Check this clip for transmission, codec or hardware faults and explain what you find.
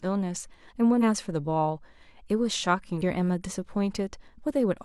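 Two faults are audible in the speech, both damaged data in a compressed stream, at 0.98 to 1.03 s and 2.98 to 3.02 s. Corrupted bytes make the decoder misread frames and resynchronise, giving a brief chirp or blip.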